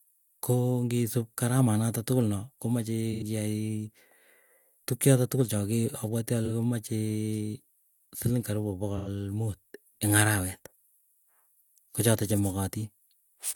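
AAC frame loss with concealment at 3.12–3.23, 6.45–6.51 and 8.91–9.08 s: the decoder reuses the last good spectrum, leaving brief smeared, noisy patches that show as blurred, flattened blocks on a spectrogram.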